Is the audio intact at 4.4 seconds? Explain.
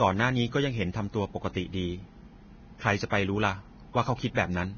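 No. From 4.35 to 4.37 s, just before the 4.4-second mark, there is pre-echo: a short hiss runs for about 27 ms ahead of a sharp speech onset, and the attack itself sounds softened and smeared. A transform codec spreads its quantisation noise across a whole block, so noise sized for the loud onset also fills the quiet gap before it. On a waveform, low-level fuzz rises before the transient; a spectrogram shows a broadband haze bleeding leftward from the onset.

That moment also carries the grainy, hissy texture heard throughout the clip, with nothing above 6.5 kHz. The likely cause is heavy Vorbis compression, and the damage points to a very low bitrate, around 18 kbps. The codec cuts the treble off and quantises what remains so coarsely that fine spectral detail turns into noise of similar energy, roughening the tone of the speech. A spectrogram shows a hard horizontal ceiling at 6.5 kHz and speckled, blotchy texture in place of smooth harmonics below it.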